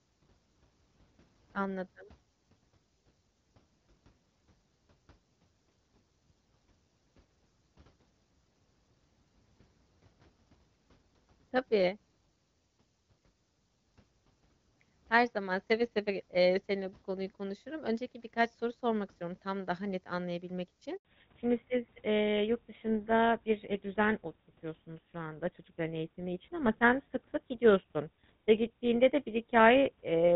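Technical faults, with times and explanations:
Throughout: switching supply whistle. A thin, steady high whistle sits around 10 kHz, wandering between 9.57 and 10.00 kHz, roughly 25 dB below the speech. It comes from a switching power supply running in an audible burst mode or beating against another supply, so its pitch shifts slightly as the load varies. A spectrogram shows a narrow horizontal line near 10 kHz that drifts a little up and down. The waveform barely changes, since the tone is so small.
20.97–21.05 s: handover gap. Right after "tam daha net anlayabilmek" the sound fades out within a few tens of milliseconds and stays silent for 80 ms. The call was being passed from one network to another, and no speech frames arrived until the new link was running, so that stretch is simply missing. The waveform shows a short, nearly flat run. The spectrogram shows a clean vertical stripe of silence across every frequency.
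21.05 s to the end: fallback to narrowband. From the moment the link returns, nothing is left above 4 kHz, and the speech turns duller and rougher than the light AMR-WB coding heard before. That fits the call dropping from HD Voice at 12.65 kbit/s to the older GSM full-rate codec, which carries only telephone bandwidth. On a spectrogram the energy ends at a hard ceiling at 4 kHz from that point on. The waveform loses its fine, fast detail.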